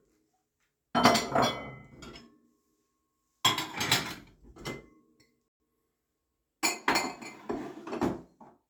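A recording of sounds that has a playback stall: the audio cuts to silence from 5.48 to 5.60 s, about 120 ms, then carries on, likely because the player briefly ran dry.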